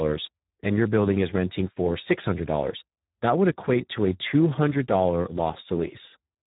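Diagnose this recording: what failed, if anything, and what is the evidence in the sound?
The codec stage failed: the speech was carried through the Speex codec at a very low setting, consistent with roughly 8 kbps. With too few bits for the excitation, the voice turns hoarse and noisy throughout, and nothing remains above 3.8 kHz.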